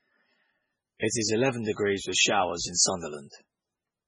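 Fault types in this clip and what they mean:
MP3 compression: The speech sounds watery and swirly throughout, with smeared onsets, likely from heavy MP3 encoding at a bitrate around 16 kbps. On a spectrogram, everything above 10.4 kHz is absent, and the weaker detail below that cut-off blinks on and off between frames.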